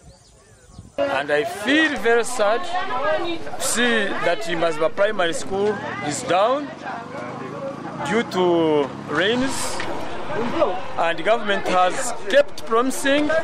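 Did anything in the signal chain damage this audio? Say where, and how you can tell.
Yes. Low thumps at 1.98 s, 5.54 s and 9.42 s are DC steps of about -26 dBFS, from the converter or an input with an offset being switched in. The zero line jumps, holds, returns, then jumps and stays to the end.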